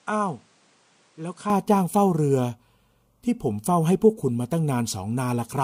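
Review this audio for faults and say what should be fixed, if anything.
The input likely switched to a poorer device, which captured the first 1.5 s before the main input took over. That opening speech stops at 10.4 kHz, sits about 5 dB lower, and carries extra noise roughly 35 dB below the signal, clearing without a gap at 1.5 s. Fix the input device before recording starts so the system cannot change sources mid-take.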